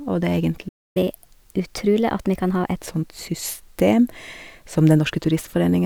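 At 0.68 s, right after "det er", the speech halts for about 0.27 s in a playback stall, likely the player starving for data; the waveform shows a flat gap.

From 0.97 to 2.76 s, catch-up at higher speed plays the backlog at 1.15x, raising pitch about two semitones; spectrogram harmonics sit visibly higher until they drop back.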